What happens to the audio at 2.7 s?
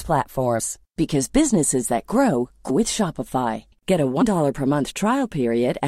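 At 2.69 s the speech jumps forward. This is a case of compressed frames skipped. About seven frames of the coded stream never reach the output, either because they are missing or because the decoder rejected them as damaged. Roughly a fifth of a second of speech simply disappears. It comes through as a sudden jump where the sound lurches ahead.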